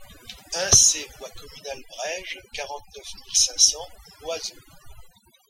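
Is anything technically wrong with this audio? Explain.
Yes, there's overdone noise removal running the whole way through. The denoiser was pushed too hard, gating bands near its noise estimate, so the background goes twinkly-silent and quiet parts of the speech go with it.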